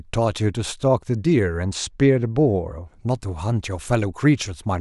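This is a speech clip. From 1.64 to 2.83 s, channel delay causes comb filtering. One channel lags by about two samples before mono summing. The top end turns dull, with the first notch near 10 kHz.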